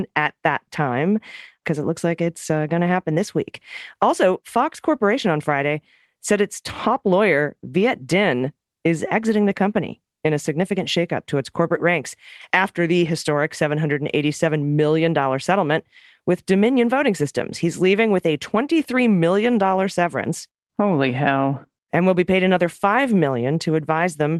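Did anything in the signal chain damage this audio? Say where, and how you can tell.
No, nothing in the signal chain has damaged this speech. It has passed through a call path whose codec limits the top end to about 12 kHz, which fits Opus working normally, with its usual coding noise.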